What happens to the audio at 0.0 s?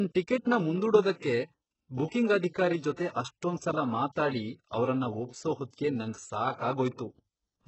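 Right from 0.0 s and through the whole clip, the speech carries heavy codec damage, with nothing above 8 kHz. That fits HE-AAC compression at a very low rate, around 8 kbps, as the likely cause. The codec keeps only the lower spectrum and fakes the treble by copying lower bands upward under a coarse envelope, so harmonics don't line up across the crossover and s sounds come out gritty, metallic or lispy.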